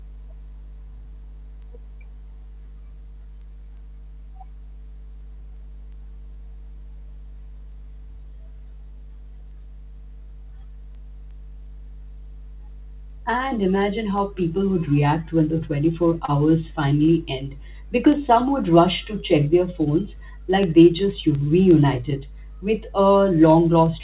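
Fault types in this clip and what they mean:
Mains hum: Power-line current has found its way into the signal path, through a ground loop or a transformer nearby, and rides along under everything. Here it shows as a steady low tone at 50 Hz, sitting only about 20 dB below the speech, so it is plainly audible in the pauses and thickens the low end whenever anyone talks, with some low harmonics stacked above the fundamental.
Word clock ticks: A digital audio link is being received by a device running on its own clock rather than locked to the sender, and the two clocks drift apart by roughly 70 parts per million. Each time they slip past one another a single sample is dropped or doubled. From about 0.19 s to the end this produces sharp ticks recurring roughly every 0.4 s, uneven in strength, like a steady metronome over the speech.
Short concealed packet loss: About 30 ms of the call's audio failed to arrive at the decoder in time, and the receiver covered the gap by extending the preceding sound before blending back into the real signal. 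At 16.25 to 16.31 s this leaves a brief smeared, wobbly moment in the speech, over the narrowband G.711 call sound that has nothing above 4 kHz.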